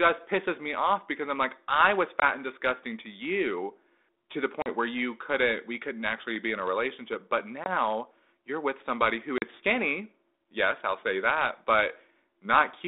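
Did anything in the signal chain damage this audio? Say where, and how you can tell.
Yes, at the network stage: packet loss on an ADPCM call, heard as hard-edged silent gaps at 2.2 s (after "I'm like I was", before "and disgusting to you"), 4.62 s, 7.64 s (after "in a relationship but") and 9.38 s (after "you're with somebody who"). The gaps run about 20, 40, 20 and 40 ms, which fits one or two lost packets each. On a waveform they appear as flat silent cuts with abrupt edges. On a spectrogram they are full-height blank stripes across the 200 Hz to 3.7 kHz telephone band of the 32 kbit/s G.726 stream. Because the decoder's adaptive predictor and step size drift from the sender's, each gap is followed by slightly distorted speech for some tens of milliseconds.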